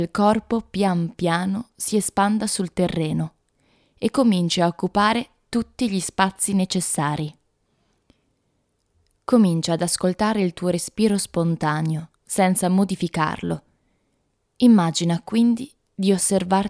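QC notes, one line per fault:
No faults heard anywhere in this speech recording.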